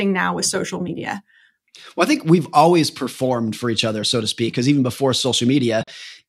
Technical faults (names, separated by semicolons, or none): Bluetooth dropout